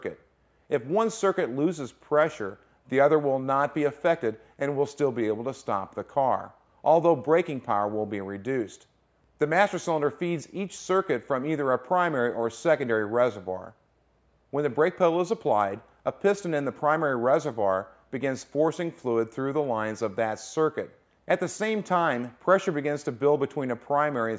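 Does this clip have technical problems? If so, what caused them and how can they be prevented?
No, this clip has no technical problems, so there is nothing that needs preventing.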